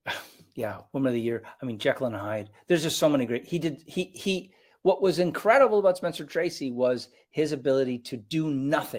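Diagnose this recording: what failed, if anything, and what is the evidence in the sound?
No stage of the chain shows a failure, and the speech signal stays continuous and steady, with nothing in the sound that points to a defect anywhere from capture to playback.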